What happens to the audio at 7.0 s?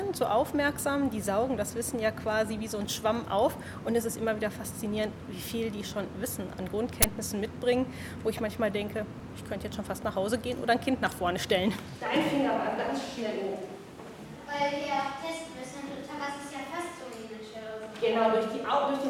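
An uninitialised buffer hits at 7.02 s: for about 20 ms, a block played before audio was written to it, so leftover memory came out as a short, loud crack of digital noise.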